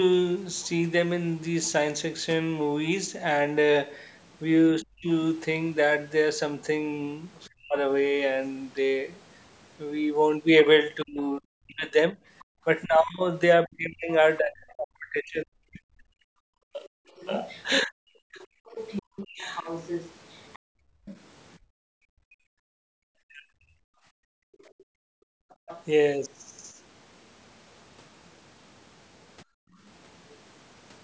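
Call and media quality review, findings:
Other side's voice leaking through: faint second voice as brief blips at 4.33–4.37 s and 7.44–7.49 s, then clearly audible at 17.16–21.58 s and 24.59–28.29 s, roughly 15–20 dB under the talker. Likely residual loudspeaker echo the echo canceller failed to remove.

Speech suppressed in double talk: talker's voice dips by as much as roughly 40 dB or drops out in pieces across 4.81–7.76 s, 11.04–19.45 s (about four seconds affected) and 23.22–23.54 s. Likely echo canceller unable to separate near talker from far-end echo, attenuating both.

Background gated by the echo canceller: room tone abruptly drops, about 33–34 dB, at 12.45–12.56 s, across 19.02–25.68 s (about four seconds total), and at 29.45–29.79 s. Canceller clamping the microphone during loudspeaker playback, releasing afterwards. Call-path bandwidth ends at 8 kHz.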